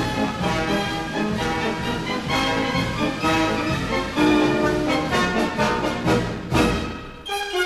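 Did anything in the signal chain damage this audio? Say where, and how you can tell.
No, nothing along the way seems to have harmed this one; I can't pick out any stage in the chain that left a mark on it.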